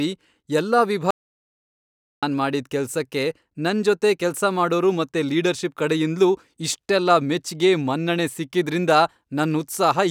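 At 1.11 s the speech drops out to silence for 1.12 s, with no room tone, until 2.23 s; likely an input loss while recording continued.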